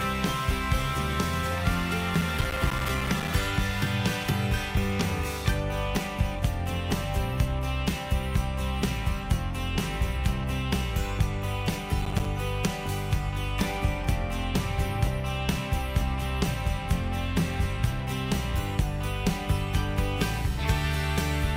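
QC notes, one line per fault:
2.11–3.28 s: processor overload crackle, a rough second of gritty tearing as around thirty short buffers, each roughly 5 ms, drop to silence.
12.02–12.25 s: processor overload crackle again, briefer, with about ten missed buffers leaving hard-edged silent gaps that crackle.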